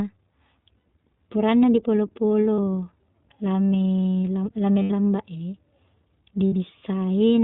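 iLBC codec coding is audible from start to finish. Everything above 4 kHz is missing, and each short frame's excitation is coded separately, so the speech is clear but rough and slightly synthetic. This points to 15.2 kbps with 20 ms frames.

Lost iLBC frames occur at 0.78–0.86 s, 2.56–2.59 s, 4.82–4.92 s and 6.47–6.53 s, covering about 80, 40, 80 and 60 ms of audio. The decoder fills each gap by repeating the last pitch cycle mixed with noise, heard as a held, slightly buzzy or breathy vowel before the voice is right again almost at once.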